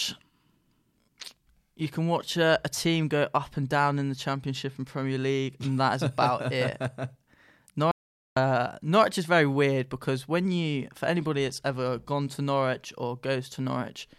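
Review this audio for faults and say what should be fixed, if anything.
The speech has an audio dropout to silence from 7.91 s to 8.36 s. The sound cuts out mid-flow and returns about 450 ms later. The gap is fully silent, with no room tone underneath. Whatever was said in that window is lost. The likely cause is that the input signal briefly disappeared while the recording went on writing silence. A loose cable, a failing wireless link or an accidental mute could each do this. To prevent it, secure connections, check wireless links and monitor the input during recording.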